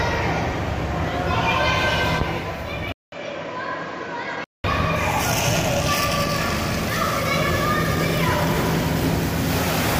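From 2.92 to 4.64 s, after a 200 ms gap, the sound turns dull and a little quieter, with nothing above 7.4 kHz: likely an input switched to a poorer device.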